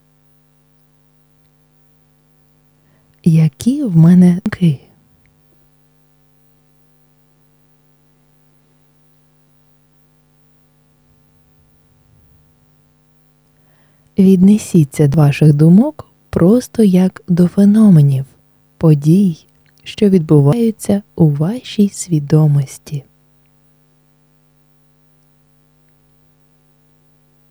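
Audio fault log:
4.46 s: dropped buffer (overrun). An abrupt forward jump in the sound and no gap of silence. About a third of a second of material is missing, and the audio on either side is butted directly together.
9.94 s, 15.14 s, 20.53 s: dropped buffer (overrun). The same skip, each time losing a shorter piece of about a tenth of a second. The capture side was likely not reading its buffer before the hardware overwrote it, so each lost block vanishes from the timeline.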